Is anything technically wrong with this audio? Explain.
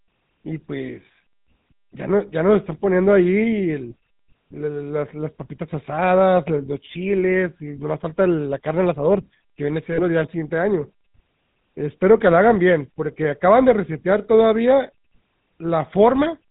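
Yes. The speech has passed through the GSM full-rate codec for its entire length, and there is a brief frame-loss event just before 10 seconds.

GSM full-rate codec, throughout: The codec models the vocal tract as a filter and excites it with a sparse, regularly spaced pulse train that keeps only every third excitation sample. The character fits the 13 kbps full-rate scheme. This gives the speech a plainly audible buzzy, gravelly roughness. On a spectrogram, energy stops sharply at 4 kHz, and the harmonics look smeared and grainy rather than cleanly striated.

Lost GSM frames, from 9.92 to 10.01 s: For roughly 60 ms, which fits three lost 20 ms frames, the decoder repeated the last good frame's parameters. The sound freezes into a short, rough, metallic ring instead of continuing naturally. On the spectrogram, that stretch shows a static, horizontally stretched copy of the preceding spectrum, before normal signal resumes.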